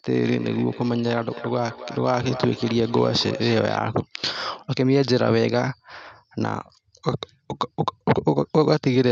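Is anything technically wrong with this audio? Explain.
Yes. From 0.32 to 3.84 s each phrase returns roughly every 300 ms, thinner and more ringing, at about 14 dB below the speech. This is feedback echo between two devices: a second device plays the call aloud, and the first microphone picks it up again.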